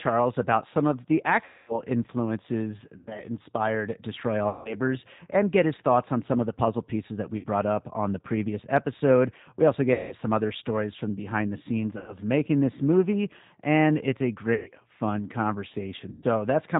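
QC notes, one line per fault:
throughout, G.729 codec: the 8 kbit/s G.729A coding is plainly audible. Nothing passes above 4 kHz, and the speech sounds rough and slightly synthetic because it is rebuilt from a vocal tract filter and sparse pulses. Unlike a simple low-pass, the texture itself is grainy.
1.44–1.82 s (after "about some of the"), 2.97–3.24, 4.49–4.77, 7.37–7.46 (between "puzzle pieces that we" and "up on the previous"), 9.93–10.15, 11.98–12.17, 14.54–14.71 (after "it's a"), 16.12–16.24 s, VoIP packet loss concealed by the speech codec: about 240, 100, 160, 60, 180, 100, 120 and 100 ms were lost, which fits 20 ms packets. The decoder repeats its last pitch and filter at falling gain, so the sound smears into a fading buzz rather than dropping to silence. Speech stays weak briefly after each event.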